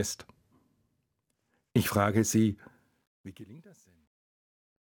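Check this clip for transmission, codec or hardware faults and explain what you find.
One fault, in the fade-out at the end. From 2.61 s to the end, the fade suffers truncation distortion: the gain stage drops low bits without dither, consistent with an 11-bit path. The tail turns gritty, worst from 3.41 to 4.83 s. Unlike codec dropouts, the grit tracks the falling level.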